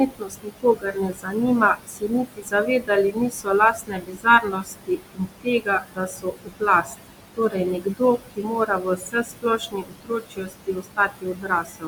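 Throughout the clip, the noise suppressor pulls bands it judges to be steady noise down by about 21 dB frame by frame, working against room noise only about 9 dB below the speech. These noise suppressor artifacts leave a residue that dips between phrases and swells under them.

The suppressor also mistakes parts of the speech for noise, turning them down by up to about 22 dB at 0.07–1.41 s, 1.6–2.91 s, 3.11–3.5 s, 3.72–6.63 s, 6.82–6.99 s, 7.35–8.02 s and 8.18 s to the end. This speech cut by the noise suppressor leaves the affected parts of the speech swallowed and faint.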